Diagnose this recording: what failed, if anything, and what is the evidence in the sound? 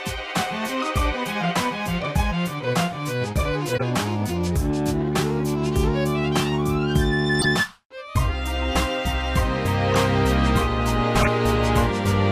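The codec decoded corrupt frames whose flipped bits put energy at the wrong frequencies, giving chirps and noise bursts at 3.72–3.83, 7.39–7.46, 9.90–9.95 and 11.20–11.28 s.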